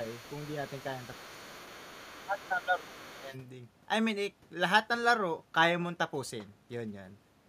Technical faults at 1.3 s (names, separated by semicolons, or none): other side's voice leaking through; speech suppressed in double talk